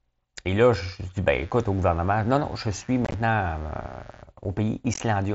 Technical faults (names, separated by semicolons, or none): mains buzz; unconcealed Bluetooth headset packet loss